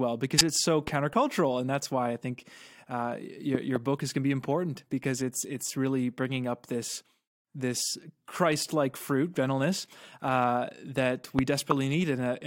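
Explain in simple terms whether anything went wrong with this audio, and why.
Two kinds of trouble show up in this speech clip.

First, a corrupt frame decoded, twice: once from 0.38 to 0.41 s and again at 11.71 s. Each time a single chunk of the compressed audio had some of its data scrambled, and the player decoded it anyway. The damaged numbers put sound at the wrong pitches for that one short chunk, so you get a quick, chirpy blip that doesn't belong to the voice. Both are very brief, but they're fairly loud.

Second, a loud pop, three times. There's a single sharp pop from 0.88 to 0.90 s, a pair of pops in quick succession between 3.55 and 3.78 s, and another single pop from 11.39 to 11.41 s. The last one is the strongest. All of them jump out well above the speech, which keeps going underneath. They're likely caused by a sudden electrical jolt somewhere in the chain, such as a plug, a switch or a bit of static.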